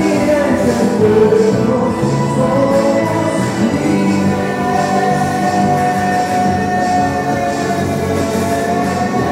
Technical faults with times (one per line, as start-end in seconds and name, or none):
none